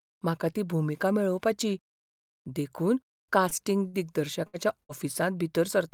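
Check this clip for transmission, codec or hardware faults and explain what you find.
Two kinds of network transmission fault appear in this speech, both late in the clip.

A short stall from a late packet occurs at 3.49 to 3.54 s and 3.87 to 3.96 s. The jitter buffer ran dry, so the last sound was held for 19 and then 60 ms with a faint buzz or dip. Speech resumes exactly where it paused, with nothing lost.

A burst of packet loss follows at 4.47 to 4.56 s and 4.83 to 4.92 s. About 60 ms was dropped each time and concealed by continuing the last sound and fading it down. Unlike the stalls, speech then jumps ahead past the missing part.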